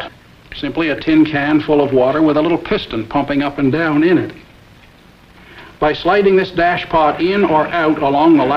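No technical faults are audible.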